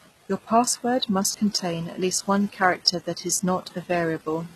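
Speech with treble that stays bright but sounds synthetic throughout: s sounds come out gritty and lispy, nothing remains above 12.3 kHz, and the damage is plainly audible. This is likely HE-AAC compression, rebuilding the upper band from copied lower bands, at a rate that fits roughly 16 kbps.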